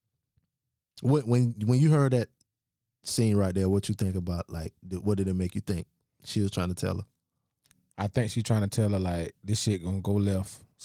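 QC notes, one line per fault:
Nothing stood out on listening to this clip.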